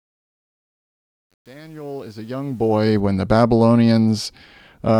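Truncation distortion on a fade runs from 0 to 3.0 s, across the fade-in that ends just before "when the". The fade keeps too few bits, about 9 by the sound, with no dither, so from 0 to 2.34 s the quiet sound turns gritty.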